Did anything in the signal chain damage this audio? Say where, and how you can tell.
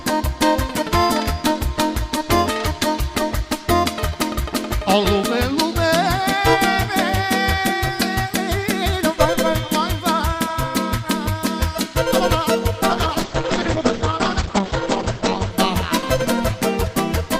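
Yes. From 12.9 to 15.6 s the audio turns muffled and rough, with nothing above 8 kHz. A call bitrate drop forced coarse, band-limited codec coding.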